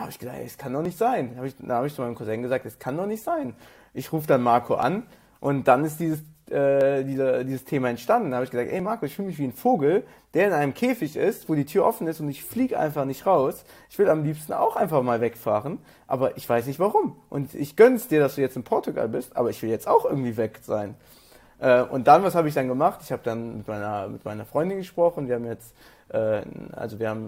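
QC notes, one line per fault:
0.85, 2.84, 4.83, 6.81, 8.80 and 14.77 s: overlap between stream segments. Each is a click or tiny skip. The player trimmed a few milliseconds at overlapping segment joins, so the waveform jumps. The skips recur about every 2 s, with a 6 s gap before the last, which fits 2-second segments.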